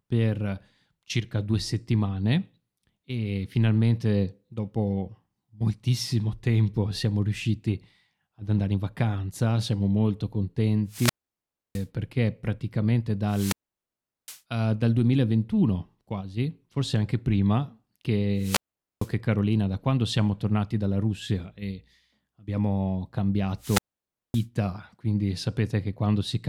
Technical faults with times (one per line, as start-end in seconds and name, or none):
10.87-11.86 wireless microphone squelch dropout
13.27-14.41 wireless microphone squelch dropout
18.37-19.12 wireless microphone squelch dropout
23.59-24.46 wireless microphone squelch dropout